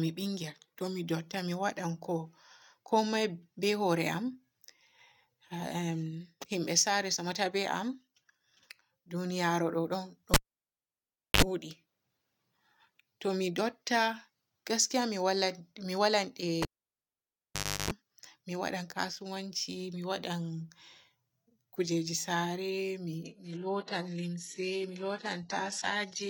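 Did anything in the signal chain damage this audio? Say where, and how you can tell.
Yes, two stages. At the analogue wiring, a live cable is pulled and plugged in twice. At 10.34 s there's a pop, about 1.04 s of near silence, a 55 ms 50 Hz mains buzz as the tip touches, then a pop at 11.42 s. Again 16.62–17.91 s: 1.24 s dead, 0.34 s of buzz.

On the network side, from 23.23 s to the end, the adaptive stream drops to a lower bitrate: a sudden, gapless quality drop with nothing above 11.5 kHz. That points to the connection slowing and forcing a step down from around 96 kbit/s AAC to 12 kbit/s HE-AAC.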